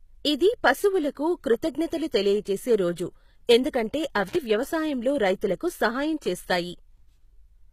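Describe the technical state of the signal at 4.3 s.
Right at that point the speech breaks off with an intermittent contact, from 4.28 to 4.36 s, just before "వ్యవసాయంలో రైతులకు సహాయం". It sounds like a loose plug or cable momentarily opening the line. The signal is actually gone for about 60 ms, with crackle at both edges where the contact breaks and remakes, and faint hiss filling the gap while it's open.

Underneath that, the whole clip carries plainly audible coding damage that's likely from HE-AAC compression, at a low rate that fits something around 20 kbps. Only the lower band is really coded, and the treble is rebuilt by copying lower bands upward under a coarse envelope, so the top end isn't the original and harmonics don't line up across the join. Nothing reaches above 14.9 kHz.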